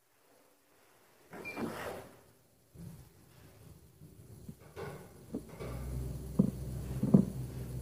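All the way through, the sound has nothing above 15.6 kHz, heavy damage that points to low-delay AAC compression at around 24 kbps as the likely cause.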